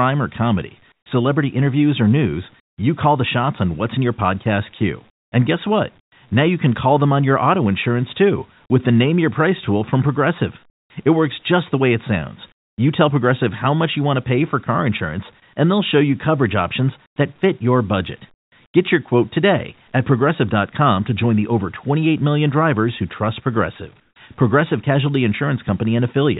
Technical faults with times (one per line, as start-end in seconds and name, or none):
0.92-1.06 comfort noise in place of the background
2.60-2.78 comfort noise in place of the background
5.10-6.12 comfort noise in place of the background
10.70-10.90 comfort noise in place of the background
12.52-12.78 comfort noise in place of the background
17.06-17.16 comfort noise in place of the background
18.34-18.52 comfort noise in place of the background
24.00-24.16 comfort noise in place of the background